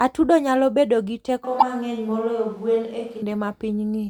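A speech clip in which the close microphone's feed appears to drop out just after "nyalo bedo gi" at 1.45 s, most likely a switch to a distant microphone. Until 3.22 s the voice turns roomy and hollow with thinner bass, though at much the same loudness, and background noise rises to about 30 dB below the speech. Inside that stretch, from 1.59 to 1.63 s, damaged data in a compressed stream makes the decoder misread frames and hunt for the next valid header, producing a brief glitch.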